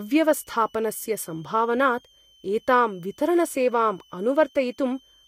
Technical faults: switching supply whistle

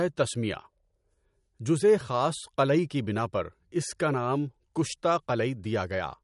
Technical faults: MP3 compression

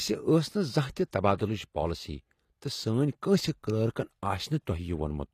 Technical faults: HE-AAC compression

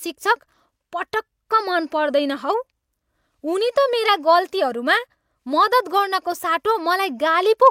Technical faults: none

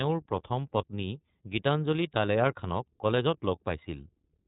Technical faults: iLBC codec

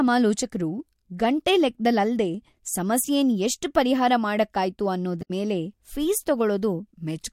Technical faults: damaged data in a compressed stream

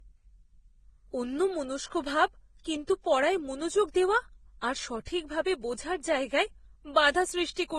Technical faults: transcoding between lossy codecs

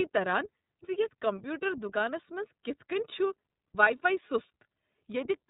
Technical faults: iLBC codec

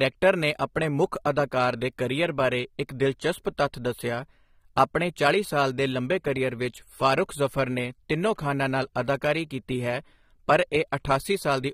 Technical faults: AAC compression

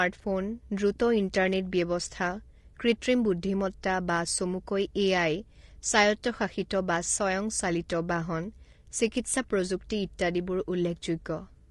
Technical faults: low-delay AAC compression

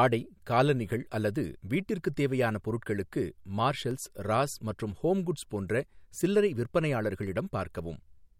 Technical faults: CD scratch ticks

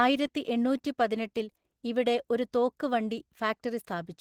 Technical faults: Opus voice compression

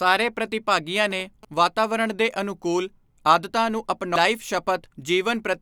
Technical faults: GSM signalling bursts; compressed frames skipped

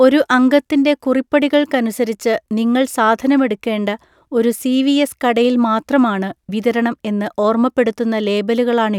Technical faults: none

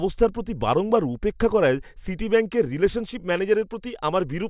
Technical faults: none

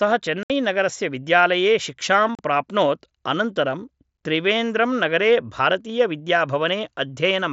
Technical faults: unconcealed Bluetooth headset packet loss

